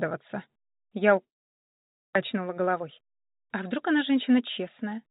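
From 1.24 to 2.17 s the sound breaks off. A long network dropout is the likely cause. The receiver fills the gap with a fading buzz that soon sinks to near silence. About 600 ms of audio never returns, and playback resumes roughly 300 ms later than before.

From 2.33 to 5.07 s a jitter buffer speed-up follows. The buffer had built up extra delay. Tiny pitch-period slices are cut again and again to trim it. The sound runs at 108% speed with unchanged pitch, so it feels hurried. About a fifth of a second is removed. Throughout, the band stops at 4 kHz, which fits G.711 A-law.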